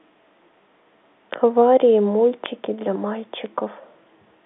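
At 1.34, 2.46 and 3.46 s the speech carries a bit error spike: a single sample jumps by a power of two when one bit flips, then snaps back, giving an isolated broadband tick unrelated to the signal, set against the telephone-band sound cut off near 3.8 kHz.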